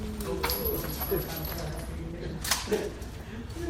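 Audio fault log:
1.59–3.05 s call bitrate drop: the sound turns coarse and muffled for about 1.39 s, which fits an encoder squeezed from 64 to 16 kbps. The spectrogram's upper band is cut away.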